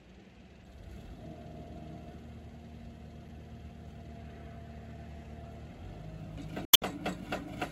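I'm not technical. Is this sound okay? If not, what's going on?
No, it has damaged data in a compressed stream: corrupted bits make the player glitch briefly, around 0.62, 3.26, and a longer hiccup from 6.65 to 6.83 seconds.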